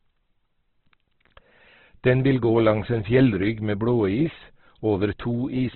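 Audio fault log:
Throughout: Opus compression, likely at a low rate around 12 kbps in its CELT music mode. The speech sounds rough and grainy, with nothing above 4.2 kHz, because the narrowed band and starved bit budget leave bands noise-filled rather than cleanly coded.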